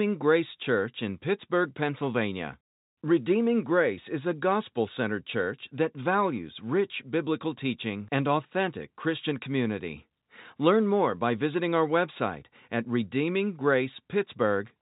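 Nothing stood out on listening to this speech clip, which carries the narrow, band-limited character of ordinary G.711 telephone coding.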